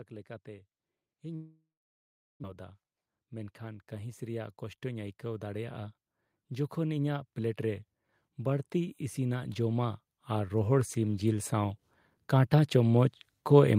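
From 0.1 to 5.97 s, automatic gain rising lifts the level by about 10 dB; voice and background swell together slowly, unlike a fade-in of the speech alone. Between 1.35 and 2.54 s, a long network dropout is likely: the sound trails into a fading buzz, then about 0.73 s of near-silence, and speech resumes with roughly a second missing rather than merely paused. From 3.06 to 3.34 s, a jitter buffer speed-up plays the speech at 111% with unchanged pitch, trimming around 40 ms, so it sounds hurried rather than chipmunk-like. From 6.48 s to the end, automatic gain rising returns, with speech and background again climbing gradually together.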